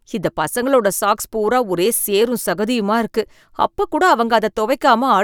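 Listening to this speech recording, nothing stood out as a technical problem at any point.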